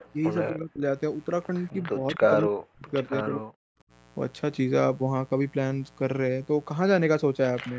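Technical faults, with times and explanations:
Throughout: mains buzz, a raspy 60 Hz hum with a ladder of harmonics, about 30 dB below the speech, seen as evenly spaced horizontal lines on a spectrogram.
0.00–0.05 s and 7.67–7.71 s: echo leak, faint copies about 25 dB down, delayed 247 ms and 228 ms, likely from loudspeaker sound slipping past the echo canceller, showing as weak repeated waveform fragments.
0.50–0.83 s, 2.02–2.26 s, 2.45–2.93 s, 3.10–3.47 s: speech suppressed in double talk, the speech dropping by roughly 15 to 40 dB for roughly 150 to 400 ms each time, likely the canceller ducking during overlap, seen as waveform notches.
3.75–3.91 s: background gated by the echo canceller, room sound dipping about 29 dB for roughly 150 ms, visible as a brief dark gap in the spectrogram's noise floor.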